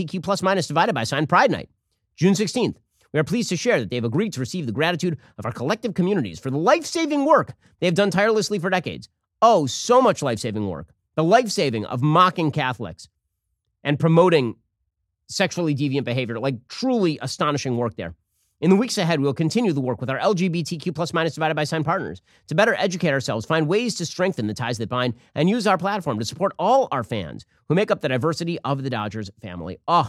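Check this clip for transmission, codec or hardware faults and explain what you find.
Nothing in the speech signal points to a transmission, codec or hardware fault; it holds steady in level and continuity throughout.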